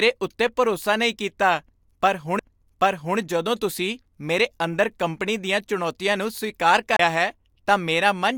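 Speech, and it has two CD skips. The first comes at 2.39 s, between "ਉੱਤੇ ਭਰੋਸਾ ਨਹੀਂ ਕੀਤਾ" and "ਜਦੋਂ ਤੁਸੀਂ ਮੇਰੇ ਅੰਦਰ", as a few-millisecond dropout. The second runs from 6.96 to 6.99 s, between "ਦੀਆਂ ਚੁਣੌਤੀਆਂ ਨੂੰ ਸਵੀਕਾਰ" and "ਹੈ ਤਾਂ", with a mute of around 30 ms. Each time the laser jumps tracks, briefly mutes, and resumes elsewhere.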